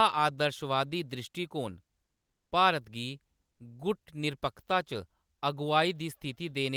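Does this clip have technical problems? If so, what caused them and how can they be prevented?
Yes. From 2.13 to 2.51 s, a gap of 0.38 s, the real background of this speech drops out and a steady, featureless hiss takes its place, about 1 dB quieter and sitting roughly 55 dB below the loudest passages. This is comfort noise in place of the background, likely from Opus discontinuous transmission (DTX): the sender stopped transmitting during the pause, and the receiver filled it with synthetic noise. Disabling DTX on the sending side prevents it.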